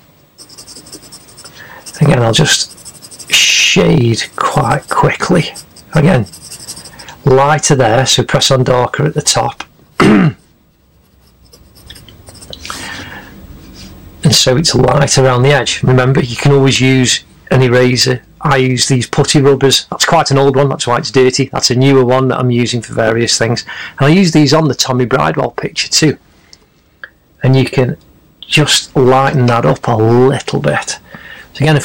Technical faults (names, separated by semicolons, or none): hard clipping